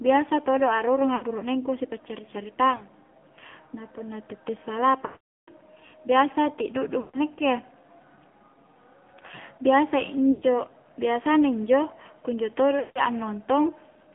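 Throughout, the speech carries AMR narrowband mobile codec damage: the band is confined to roughly 150 Hz to 3.4 kHz, and the buzzy, synthetic texture of the pulse-excited vocal tract model fits a low mode around 7.4 kbps. The coding damage is plainly audible.

Lost AMR speech frames occur at 1.16 s (60 ms), 2.78 s (20 ms), 5.06 s (420 ms), 7.00 s (140 ms), 10.32 s (100 ms) and 12.80 s (160 ms). The decoder repeats the last good settings at falling gain, so the longer runs smear, then fade, while the single frame at 2.78 s gives a brief dip or warble. The 5.06 s run goes silent before speech returns rough.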